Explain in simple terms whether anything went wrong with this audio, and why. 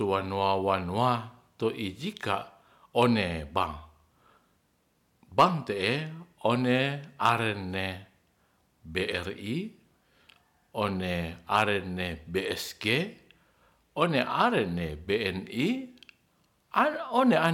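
Three brief moments of hard clipping: the speech got louder than the recording chain could handle, so the tops of the waveform were chopped flat. That flattening adds a short, harsh crackle at 5.39 to 5.44 s, 7.26 to 7.32 s, and 11.55 to 11.64 s.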